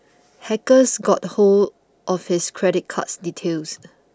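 One channel drops out from 1.65 to 1.70 s: for about 50 ms the speech level falls abruptly by about 6 dB, then returns just as suddenly, giving a brief dip in the middle of the sound. The likely cause is one side of a stereo feed going silent for that moment; once the two channels are summed to mono, everything common to both is halved, and anything carried only by the missing side vanishes.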